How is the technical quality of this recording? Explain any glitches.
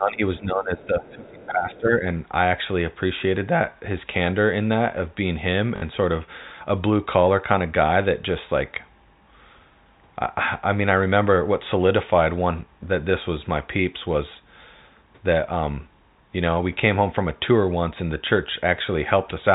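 There are a couple of rough patches, both early on, on top of a narrowband telephone sound with nothing above 4 kHz, which fits G.711 A-law coding.

From 0.0 to about 2.07 s you get speech suppressed in double talk. The talker's level sags by up to about 20 dB for roughly two seconds, and the voice sounds pushed back and ducked. The likely cause is both ends talking at once: the echo canceller couldn't tell the near talker from loudspeaker echo, so it turned everything down.

In that same stretch there are three brief scraps of the other side's voice leaking through, at 0.82 to 0.87 s, 1.05 to 1.10 s and 1.72 to 1.80 s. Each is a fragment of a second voice sitting about 30 dB under the main talker. That's likely residual echo: the far end playing from the talker's loudspeaker back into their mic, with the canceller not quite scrubbing it out.

At 5.76 to 5.82 s there's packet loss with the last packet repeated. 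About 60 ms went missing, which fits three lost 20 ms packets. The receiver filled the gap by replaying the last good packet. The result is a quick buzzy, robotic stutter.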